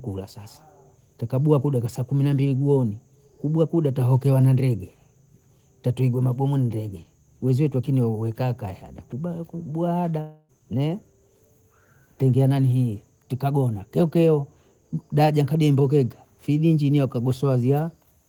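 Speech, with one break from 10.21 to 10.51 s where the sound smears into a fading buzz for about 0.27 s, goes briefly silent, then resumes with 0.28 s missing. The likely cause is a long network dropout, concealed by the receiver.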